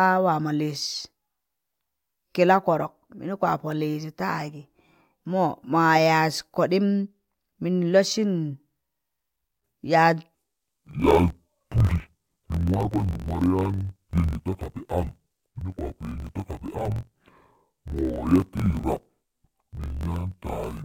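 From 10.35 s to the end, interleaved audio read as planar: each 21.77 ms block's samples are split into halves and stretched, dropping the speech an octave lower, dull and robotic, buzzing at 45.9 Hz. Spectrograms show harmonics compressed downward; waveforms show discontinuities every block.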